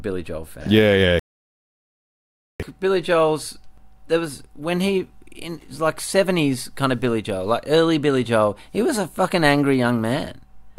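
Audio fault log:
1.19–2.60 s rebuffering stall: speech halts into 1.4 s of silence, then continues exactly where it stopped, so unlike a dropout nothing is skipped, only time added.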